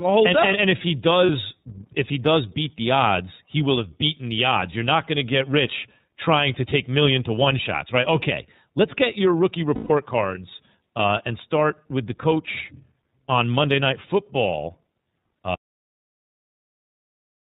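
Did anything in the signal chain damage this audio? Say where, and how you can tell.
Yes. Throughout, the speech stops at 4 kHz and sounds rough and synthetic. That is the iLBC codec, and the sound fits its 13.33 kbps, 30 ms framing. This is narrowband coding, not a later low-pass filter.

Lost iLBC frames, a network fault, appear at 1.26 s after "and if he" (30 ms, one frame) and at 9.75 to 9.91 s after "let's get your rookie" (about 150 ms, five frames). The decoder repeated the last pitch cycle, so these gaps are filled with a held buzzy vowel rather than silence. Speech resumes almost at once with "cards uh and start".

An audio dropout to silence runs from 15.54 s to the end. It is silent with no room tone and no concealment buzz, which most likely points to the input being lost at capture.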